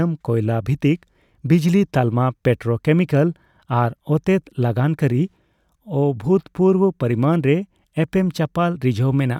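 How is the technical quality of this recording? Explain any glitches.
No technical faults are audible anywhere in the speech recording, so there are no glitches to explain.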